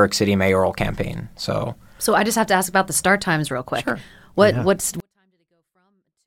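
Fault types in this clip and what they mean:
24-bit alignment error (too quiet): After "yeah what's", at 5.00 s, the speech suddenly falls to a near-silent whisper. It stays clean and undistorted, with no crackle or hiss, and remains that faint until the clip ends at 6.26 s. The cause is samples held as 24-bit values in the low bytes of each 32-bit word but read back as full 32-bit integers. That puts every sample eight bits too low, a drop of about 48 dB.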